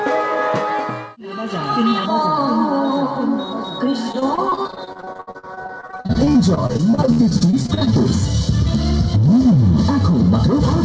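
From 2.06 s to the end, the sound turns hollow and phasey. This is channel delay, causing comb filtering. One channel runs late by roughly 0.2 ms, a tiny offset of only a few samples. When the two channels fold to mono, the shared content cancels at evenly spaced frequencies. The first notch sits around 3 kHz, so the upper midrange thins out. The band above the notch is limited anyway, since the call path carries nothing above 8 kHz.

From 4.12 s to 7.98 s, repeated packet loss makes the audio choppy and robotic. Dozens of short dropouts arrive in quick succession, each lasting up to 70 ms. Every hole is patched by stretching the last sound forward, and the next hole follows soon after. About 1.1 s of the stretch is filled this way, close to a third of it. The result is a stuttering texture, with pieces missing throughout.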